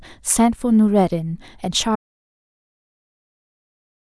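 At 1.96 s the speech cuts off mid-flow in an audio dropout to silence that runs to the end of the clip. The gap is silent with no room tone, likely from the input being lost while recording continued.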